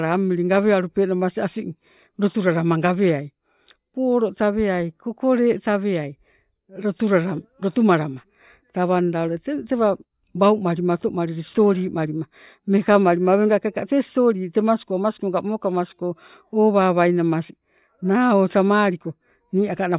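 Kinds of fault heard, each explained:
No kinds of fault are heard in this clip.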